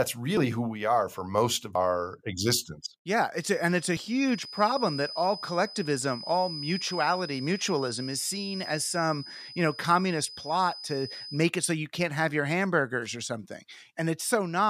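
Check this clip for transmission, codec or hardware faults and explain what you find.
Two faults are audible: three skips and a sustained whistle.

Dropped buffers (overruns) occur at 0.37 s, 1.75 s and 3.97 s. Each is a sudden jump forward in the speech, and no gap of silence. The likely cause is the program failing to read its input before the hardware overwrote it, so a chunk vanished and the surrounding audio was spliced together. The losses sound short, from roughly a hundredth of a second to a few hundredths, with the middle one longest.

A feedback whistle runs from 3.33 s to 11.49 s. It is a thin, steady tone at 5 kHz, about 15 dB below the speech, swelling and fading slowly in level. This is likely a loudspeaker-to-microphone loop held just at the edge of feedback. One frequency keeps ringing without building into a howl.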